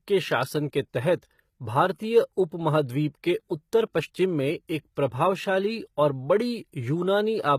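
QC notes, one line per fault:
Throughout, HE-AAC compression: the treble reaches high but sounds gritty and metallic, s sounds lisp, and nothing reaches above 14.9 kHz. This is likely spectral band replication rebuilding the top from copied lower bands, which fits a bitrate near 20 kbps.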